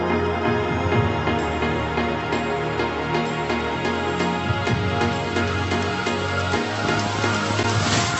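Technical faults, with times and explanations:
6.85 to 8.20 s, train of clicks: a burst of sharp, similar-shaped pulses at about 13.6 per second, spaced unevenly, ticking over the sound to the end of the clip and peaking roughly 10 dB above it. The ragged pacing and repeated similar shape point to something outside the audio injecting impulses, likely electrical interference from nearby equipment or a faulty connection or power supply, rather than anything in the sound itself.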